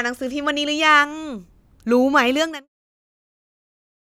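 No technical faults can be heard in the speech. Near the end, the level fades out smoothly from around 2.5 s to 2.69 s, with no click or hard edge.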